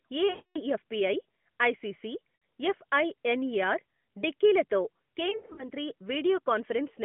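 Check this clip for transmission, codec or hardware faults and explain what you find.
Lost AMR speech frames occur three times, heard through narrowband AMR-NB mobile audio. At 0.30 to 0.60 s, 260 ms of sound is stretched and fades toward silence. The decoder repeats the last good pitch and vocal-tract settings at falling gain. At 2.36 to 2.42 s, just before "ఎఫ్ఐఎన్ఈఆర్ డిక్కీ లతో", 60 ms of sound is drawn out. From 5.30 to 5.69 s, just after "ఎఫ్ఐఎన్ఈఆర్ డిక్కీ లతో", scattered losses total 180 ms, with the longest run 80 ms. The fading concealment sets this apart from a hard dropout to digital silence.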